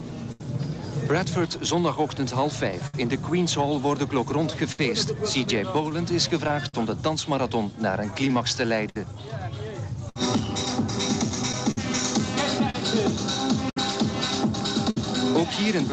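Running under the whole clip is clock drift between sender and receiver: the far end's clock ticks roughly 5 percent slower than ours, so the jitter buffer keeps draining and the receiver has to stretch and patch to keep playing. You hear it as a faint, restless unevenness in timing, little hiccups landing at irregular spots rather than one obvious glitch.

The first clear event is a short stall from a late packet at 0.32 to 0.41 s. The buffer ran dry, so the receiver held the last sound for about 78 ms until the packet turned up, then carried on from the same point. Nothing is actually lost, but that moment is drawn out, and everything after it sits about 78 ms later than before.

From 1.38 to 8.67 s come repeated timing corrections. Here the receiver keeps slipping in tiny repeated fragments to make up for the slow sender. In total that adds something like 70 ms over that stretch, an effective playback speed of 99 percent. 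Each edit is tiny, so it comes across as a slightly sagging, wobbly tempo with the odd soft stutter rather than distinct clicks.

Then, from 2.71 to 14.97 s, there are scattered short gaps, around twenty of them, each one a packet that showed up late and got papered over by extending the previous sound. Together they cover roughly 0.7 s, about 5 percent of that span, with the longest near 70 ms. No content actually drops out. You get brief smears and little ticks sprinkled through most of the clip. The top end stops around 8 kHz throughout, which points to Opus at a wideband setting somewhere near 40 kbps.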